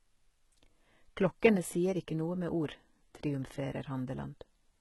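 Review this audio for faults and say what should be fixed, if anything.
Throughout the speech, s sounds come out gritty and lispy, and nothing extends above 11.8 kHz. The likely cause is heavy HE-AAC compression at a low bitrate, around 16 kbps. The codec keeps only the lower spectrum and rebuilds the treble by copying lower bands upward, so the harmonics no longer line up. On a spectrogram, the top band looks like a smeared, blocky copy of the region below, ending at a flat ceiling at 11.8 kHz. To prevent it, encode at a higher bitrate with standard AAC or Opus.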